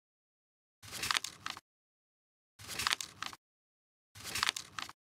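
Clock drift buffer slips occur from 1.1 s to 4.88 s as a short click or pop repeating every 1.26 s, roughly four in all. The likely cause is two devices whose clocks disagree by around a thousand parts per million, so a buffer periodically drops or repeats a block of about fifty samples.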